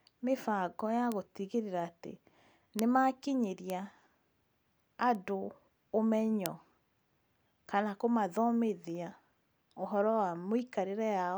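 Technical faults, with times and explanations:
1.12, 2.79, 3.70, 5.15 and 6.46 s: bit error spikes. Each is one sharp, broadband tick unrelated to the speech. A flipped bit jumps one or two samples by a power of two, peaking from about -29 dBFS at 5.15 s to about -5 dBFS at 6.46 s.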